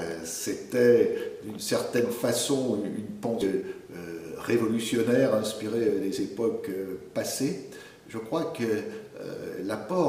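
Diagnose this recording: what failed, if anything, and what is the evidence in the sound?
A skip ahead occurs at 3.41 to 3.43 s. The sound jumps forward with no gap and no fill, and the material on either side is spliced almost directly. Around 0.4 s of audio is missing. The stage is the network path and receive jitter buffer: a block of audio was lost in transit or discarded when the buffer overflowed while later packets were already queued. Playback latency dropped by roughly 0.4 s at that point.

A jitter buffer speed-up follows from 3.55 to 4.14 s. The sound runs at about 107% speed with the pitch unchanged and a slightly hurried quality. The receiver was holding more audio than its target depth, so it removed short segments of one or a few pitch periods repeatedly to pull latency down. About 50 ms in total was trimmed over that stretch. This is again the jitter buffer stage.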